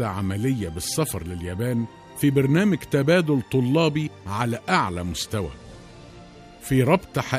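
Nothing goes wrong anywhere in this one; there are no dropouts, glitches or other technical faults to point to at any moment.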